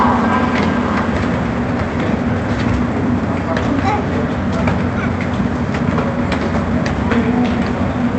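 No technical faults are audible.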